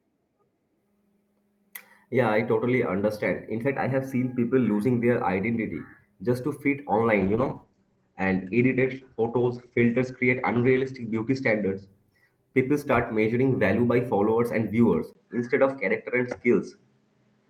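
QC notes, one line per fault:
7.2 to 13.73 s, call bitrate drop: Right after "identity just to fit", the speech turns rough and watery and loses its top end, staying degraded until "by followers and viewers". The encoder's rate fell from 48 kbps to 11 kbps and sat at its lowest for about 3.7 s. With so few bits the coding is coarse, and the audio band shrinks from 20 kHz to 8 kHz, which causes the muffling.
15.13 to 17.5 s, input switched to a poorer device: Shortly after "by followers and viewers", a brief 20 ms gap opens. From there to the end the speech sounds duller and boxier, with nothing above 8.5 kHz and a faint new background noise well beneath the speech. Loudness stays about the same. The likely cause is a switch of input to another microphone or a headset's call profile with a narrower passband and its own noise floor.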